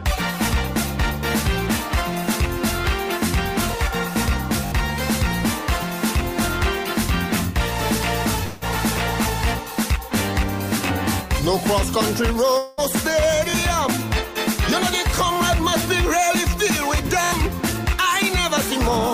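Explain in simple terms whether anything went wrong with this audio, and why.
Repeated buffer, at 4.66 to 4.72 s, 9.74 to 9.76 s, 13.50 to 13.54 s, 15.34 to 15.36 s and 17.24 to 17.32 s: new audio arrived late, so the player replayed its last short chunk, which fits a 20 ms buffer, one to four extra times. Each spot sounds like a quick stutter and skips up to about 70 ms of sound.

At 8.43 to 8.63 s and 12.57 to 12.80 s, about 0.2 s of sound is missing each time, most likely from a long network dropout. The receiver covered each gap by stretching the last sound into a fading buzz or hiss, then resumed without the lost piece.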